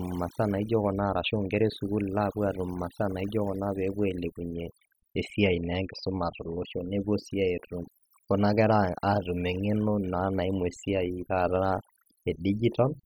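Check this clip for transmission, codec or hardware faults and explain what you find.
The one problem here isn't a transmission, codec or hardware fault. It's overdone noise removal, running through the whole clip. A noise reduction stage was pushed too hard, so any frequency band sitting close to its idea of the noise floor gets pulled way down or shut off entirely, and the softer parts of the speech get caught up with it. You hear it as a background that's dropped away and broken up into little twinkling, warbling specks.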